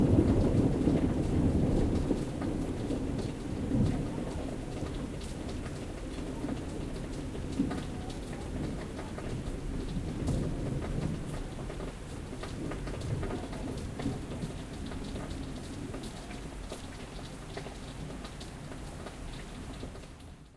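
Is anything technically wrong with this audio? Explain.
No, there are no technical faults in this audio.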